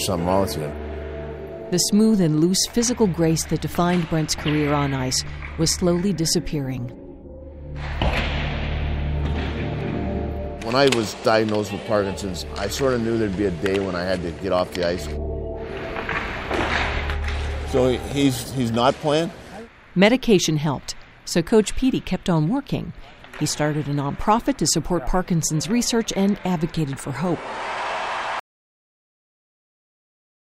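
At 28.40 s the sound stops abruptly, mid-flow, and never returns: the final 2.2 s or so, running to the end of the clip, are silent with no room tone or background hiss left. That is an audio dropout to silence. The likely cause is the input being lost, through a disconnected device, a failed link or an accidental mute, while the recorder kept writing silence. Whatever followed that point is simply gone.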